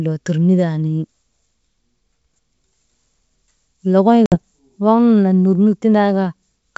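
Packet loss on an ADPCM call hits at about 4.26 s. A hard-edged silent gap follows, then speech returns slightly off, since the decoder's predictor must resync, settling by 4.38 s.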